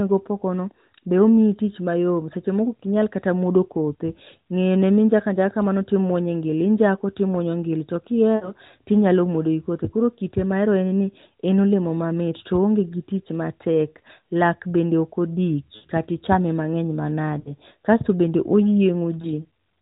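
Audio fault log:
8.36–8.52 s, 15.76–15.86 s, 17.40–17.52 s and 19.22–19.27 s, lost AMR speech frames: the speech smears into a drawn-out, fading sound for about 60, 80 and 60 ms, which fits runs of three, four and three lost 20 ms frames, and dips briefly for about 20 ms where one frame is lost. The decoder repeats the last good pitch and vocal-tract settings at falling gain, so unlike a hard dropout there is no clean silence or click. The narrowband codec's 4 kHz ceiling persists through each gap.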